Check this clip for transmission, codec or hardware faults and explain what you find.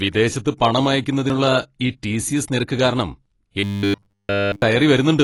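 Two faults are present: codec damage across the whole clip and a short stretch of robotic sound near the end.

Throughout the speech, the sound is dull and smeared with a fizzy edge on sibilants. This is likely AAC compression, where a low bitrate, around 32 kbps, forces a lowered cut-off and coarse quantisation of the spectrum.

From 3.60 to 4.62 s the speech turns into a rigid metallic buzz at 100 Hz. This is robotic sound from repeated short buffers, likely caused by late-arriving audio being covered by looping the last 10 ms, with essentially all of that stretch replaced by repeats.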